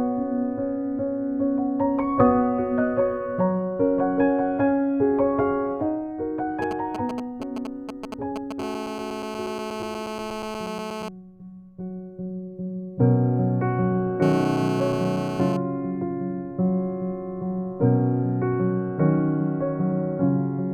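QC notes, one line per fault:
6.62–8.61 s, GSM signalling bursts: a nearby 2G phone handshaking, so you get galloping ticks and short 217 Hz buzzes rectified into the audio, roughly 10 dB under the programme.
8.62–11.09 s and 14.23–15.57 s, GSM phone buzz: that phone now in a call, bursting steadily at 217 Hz, giving a hard, raspy, harmonic-rich buzz about 8 dB below the signal.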